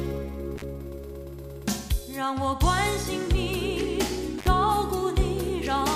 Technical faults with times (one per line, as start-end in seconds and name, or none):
0.56-0.63 intermittent contact
4.38-4.48 intermittent contact